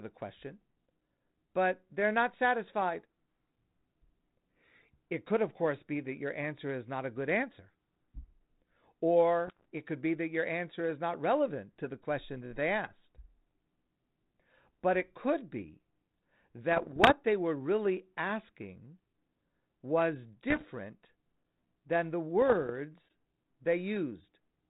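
Short bursts of pops and gritty roughness with brief level jumps at 9.47–9.66, 16.72–17.12, 20.50–20.65 and 22.42–22.70 s are bit errors on an ADPCM link. Flipped bits derail the decoder's step size and predictor, so each hit rings on briefly.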